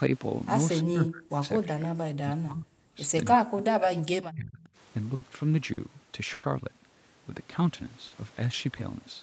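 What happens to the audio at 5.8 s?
A short stall from a late packet occurs between 5.73 and 5.80 s. A packet arrived late and the jitter buffer ran empty. The receiver stretched the last sound by 40 ms, then resumed from the same point. Nothing is lost, but the sound holds briefly with a slight buzz or dip.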